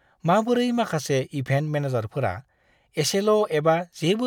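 No technical faults can be heard anywhere in the recording.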